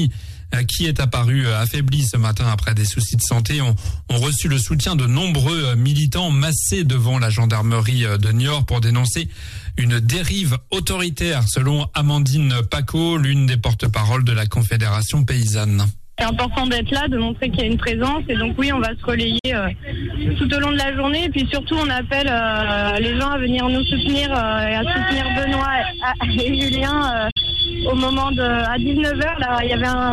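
The receiver lost its digital signal, or got frames that failed their checksum, at 19.39–19.45 s and again at 27.31–27.37 s, a digital broadcast dropout each time. The audio fades out over about 8 ms into a brief silence that fits two lost frames, then returns with that stretch missing.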